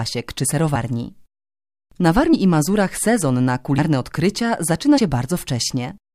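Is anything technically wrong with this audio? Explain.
Yes. The speech has compressed frames skipped at 2.32 s and 4.97 s. Whole frames of the encoded stream were never played because they were lost or rejected by the decoder as damaged. The audio jumps forward, roughly 40 ms the first time and nearer 70 ms the second, which fits dropping a few frames of about 21.3 ms each.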